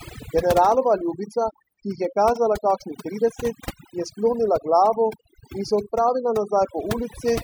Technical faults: overdone noise removal

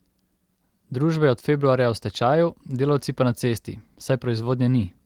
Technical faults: clock drift between sender and receiver; repeated timing corrections

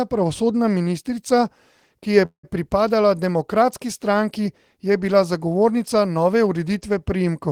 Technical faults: call audio freeze

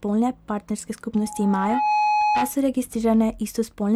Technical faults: loudspeaker feedback squeal

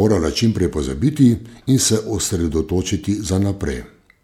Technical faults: corrupt frame decoded

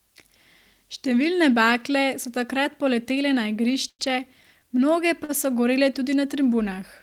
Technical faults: short stall from a late packet

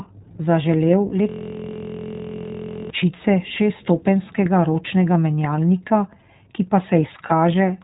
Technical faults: iLBC codec; lost iLBC frames

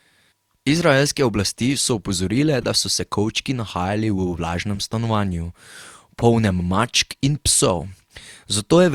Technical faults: corrupt frame decoded

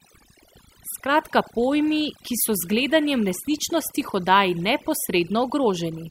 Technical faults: overdone noise removal

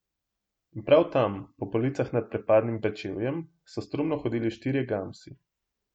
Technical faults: none

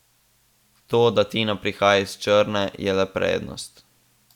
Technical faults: none

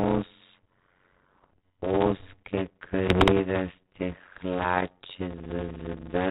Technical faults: block size mismatch (padded); bit errors on an ADPCM link

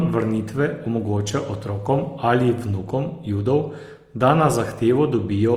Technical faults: Opus compression

